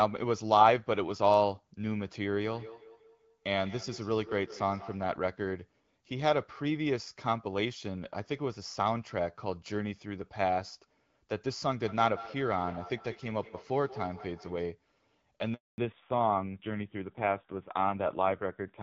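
From 2.51 to 5.13 s and again from 11.86 to 14.71 s, a feedback echo between two devices is heard. A second device's playback leaks back into a microphone that cannot cancel it, so each syllable returns roughly every 200 ms, thinner and ringing, peaking at about -17 dB and then about -15 dB. On a spectrogram, faint copies of each harmonic stack repeat at that spacing.

At 15.54 s a 240 ms handover gap cuts the sound dead while the link switches networks, and nothing spoken in that span survives. The waveform shows a flat, empty stretch with a brief decay at its leading edge.

From 15.78 s to the end comes a fallback to narrowband. The clear wideband codec heard earlier gives way to a duller, rougher sound, which fits AMR-NB at around 5.9 kbit/s. On the spectrogram everything above 4 kHz is abruptly missing.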